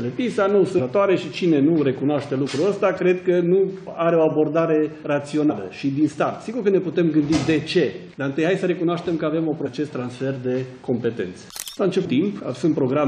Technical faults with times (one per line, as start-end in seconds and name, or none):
5.49 damaged data in a compressed stream
9.63-9.67 damaged data in a compressed stream
12.04 damaged data in a compressed stream